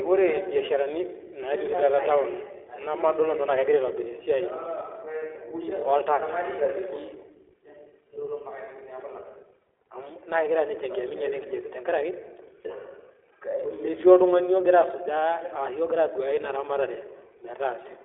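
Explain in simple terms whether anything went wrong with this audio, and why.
iLBC codec damage runs through the whole clip, from start to finish. This phone-style codec chops the speech into 20 ms slices and codes each slice on its own, without borrowing from the slice before, so the sound comes out slightly rough and synthetic. It also carries only a narrow telephone band, roughly 200 Hz to 3.5 kHz, with nothing above 3.7 kHz, which makes the speech thin and muffled, and the damage is plainly audible.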